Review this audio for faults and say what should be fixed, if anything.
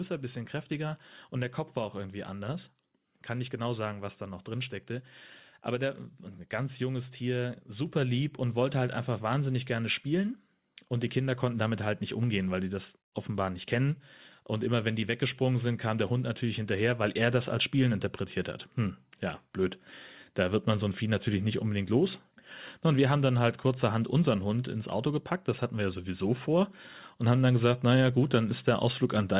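Microphone volume stepped up at 7.86 s and again at 17.04 s. The call software judged the input too quiet and raised the device's input gain in a single jump each time, by about 4 dB and then about 2 dB, so speech and background noise get louder together. To prevent it, turn off automatic microphone gain adjustment in the call software and set the input level manually before recording.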